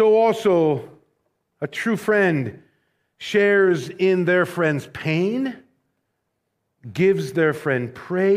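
No technical faults can be heard anywhere in the recording; the signal stays continuous and steady throughout.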